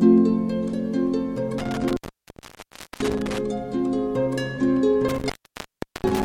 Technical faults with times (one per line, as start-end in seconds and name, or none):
1.58-3.38 intermittent contact
5.09-6.24 intermittent contact